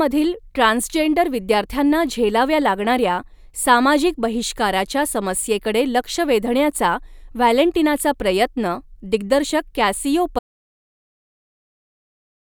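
At 10.39 s the speech cuts out mid-flow and never comes back. It's an audio dropout to silence that runs right through to the end. The gap is dead silence with no room tone underneath, so the input was likely lost somewhere upstream, maybe a device disconnecting, a link failing or a mute getting hit, while the recorder carried on writing silence. Whatever was said in those last couple of seconds is simply gone.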